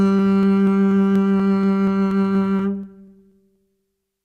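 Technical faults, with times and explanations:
0.19 to 4.03 s, periodic USB or driver dropouts: every 0.24 s, roughly 10 ms of the music is skipped outright, about fifteen times in all. Something stalls the USB bus or audio driver on a fixed schedule, so each jump in the waveform ticks evenly.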